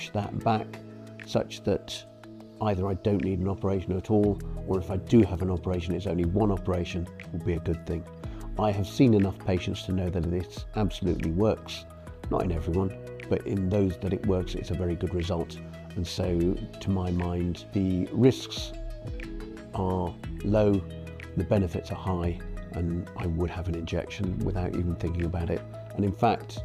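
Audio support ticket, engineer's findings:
No faults found on listening: the signal path reproduces without audible dropouts, distortion, level jumps or timing irregularities.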